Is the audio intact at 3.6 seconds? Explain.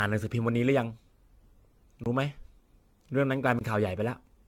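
No. From 3.59 to 3.61 s there is a block of digital silence: likely the output buffer was not filled in time, so about 21 ms dropped to silence, which fits a 1024-sample buffer, leaving a short hole. Generation loss is also present: the audio was likely re-encoded with AAC around ten times, so quantisation noise has built up and nothing remains above 17 kHz, giving a swirly, hollow sound with blurred attacks.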